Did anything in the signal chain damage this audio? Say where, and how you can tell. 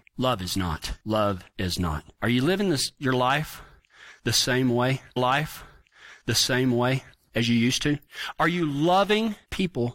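Yes. A stream segment repeated at the playback stage. From 5.16 to 7.18 s, about 2.02 s of speech plays a second time, after "the same way" and before "as you used to". A small blip marks the jump back. The player fetched or queued that segment twice.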